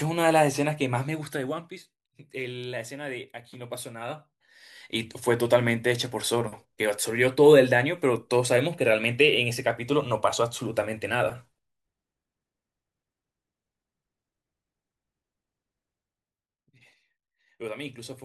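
Listening through the speech recording, nothing stood out as a technical problem at any point.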